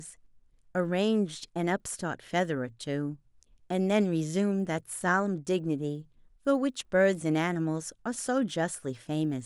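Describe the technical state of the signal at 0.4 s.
A resampler restarted on every block runs through 0.4 s and the whole clip. Each 50 ms block is converted separately, which fits 44.1 to 48 kHz, leaving edge errors heard as 20 Hz ticking under the speech.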